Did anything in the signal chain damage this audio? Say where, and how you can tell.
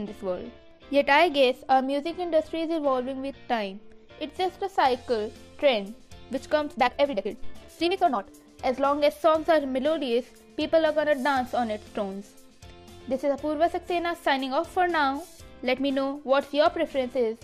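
Yes. From 6.70 s to 8.28 s the audio runs at double speed, jumping abruptly to a rushed pace while its pitch stays unchanged. That combination marks a time-stretched section. Resampling would have shifted the pitch upward along with the tempo. This was likely a software stretch at the editing or playback stage, compressing the segment to half its length by discarding short slices and splicing the remainder.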